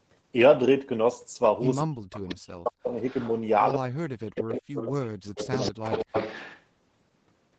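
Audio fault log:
1.84–2.96 s, 3.75–5.51 s, 5.72–5.81 s: speech suppressed in double talk. The voice drops by up to about 40 dB while the far side talks, likely from the echo canceller ducking both. The waveform shows sudden hollows in the envelope, and the spectrogram shows faded, gappy bands.
2.15–2.35 s, 3.05–3.33 s, 4.35–4.57 s, 4.77–4.88 s, 5.35–6.62 s: echo leak. A copy of the voice trails 190 ms behind, about 10 to 25 dB down, likely residual loudspeaker echo. On the spectrogram it appears as repeated harmonics offset in time, and as a low secondary ripple on the waveform.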